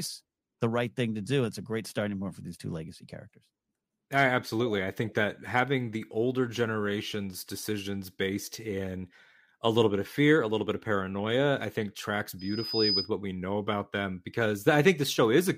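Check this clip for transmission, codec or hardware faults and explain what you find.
One hardware fault: a loudspeaker feedback squeal from 12.39 to 13.10 s, right after "paranoia I think tracks" and ending before "what we know about". The mic is hearing the speaker it drives, and at 5 kHz the loop gain tips past one, so that tone feeds on itself. You get a thin whistle swelling over about half a second until it sits a few dB above the speech, then it cuts out.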